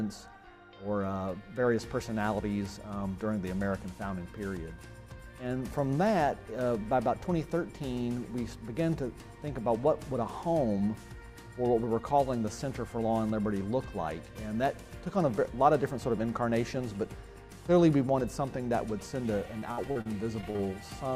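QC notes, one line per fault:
19.59–20.60 s, repeated packet loss (robotic sound): seven quick dropouts, longest 58 ms, each patched by stretching the last sound, so it goes choppy and robotic.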